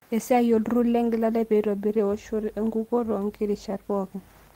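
No technical faults can be heard anywhere in the recording. Nothing in the audio calls for comment at any point from beginning to end.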